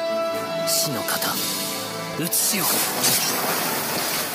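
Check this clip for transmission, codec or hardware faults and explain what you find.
There is one hardware fault, periodic USB or driver dropouts. From 2.14 to 4.18 s, about a millisecond of audio is skipped every 1.02 s, giving regular ticks, seen as thin vertical lines and waveform discontinuities.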